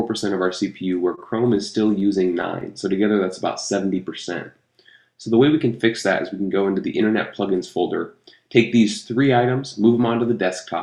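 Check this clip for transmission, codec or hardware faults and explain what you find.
Three network-delivery faults occur in the first few seconds, all bunched between about 1.15 and 3.32 s.

The short stall from a late packet runs from 1.15 to 1.19 s. One packet arrived after its playout time, so the jitter buffer briefly ran dry. The receiver held the last sound for about 20 ms until the packet turned up, then resumed exactly where it left off. Nothing is lost, and total delay rises by 20 ms. What you hear is a momentary hold on the sound, with a faint buzzy flattening at that spot.

Scattered short gaps follow from 1.99 to 2.63 s. Around four packets in this stretch went missing or came too late, each leaving a hole of about 10 ms at most. The receiver filled each hole by extending the preceding sound, adding up to roughly 40 ms, or about 7 percent of the span. Little audio is lost, but the passage carries small ticks and brief smeared hiccups.

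A jitter buffer slow-down runs from 2.72 to 3.32 s. With its reserve running low or its target delay just raised, the receiver built up a reserve by repeating single pitch periods and fragments of quiet several times over. This added 41 ms and played the section at 95 percent speed. The pitch stays put while the sound is audibly drawn out.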